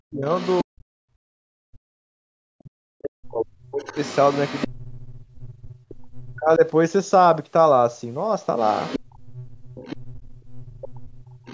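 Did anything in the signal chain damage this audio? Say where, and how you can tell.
Yes. The speech dips, thins and drops out in pieces from 0.0 to 4.95 s, again from 6.02 to 6.63 s, and from 8.98 to 11.37 s. At its deepest it falls about 40 dB in the first stretch and about 35 dB in the later two. This is speech suppressed in double talk at the call-processing stage. The likely cause is an echo canceller that couldn't tell the talker from loudspeaker echo while both sides spoke, so it turned everything down.

A second, fainter voice runs underneath at about 20 dB below the main speech: briefly from 0.31 to 0.64 s, then from 3.86 to 6.18 s, and from 8.58 s to the end. That is the other side's voice leaking through, again in call processing. It overlaps the suppressed stretches, which is likely the same double-talk situation: the far side played on the loudspeaker, reached the microphone, and the echo canceller didn't remove all of it.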